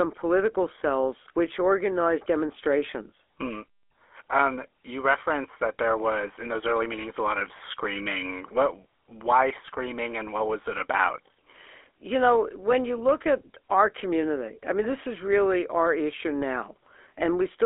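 From start to finish the speech carries the sound of the GSM full-rate codec, the original mobile phone coder, and the damage is plainly audible. The band sits at roughly 300 Hz to 3.5 kHz, so everything above goes missing. The coder models the vocal tract and excites it with a thinned pulse train, which fits a 13 kbps stream, and that is where the buzzy, gravelly roughness comes from.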